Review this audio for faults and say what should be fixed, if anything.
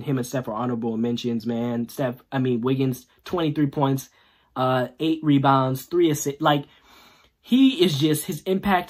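Nothing stood out on listening, so there is nothing here that calls for a fix.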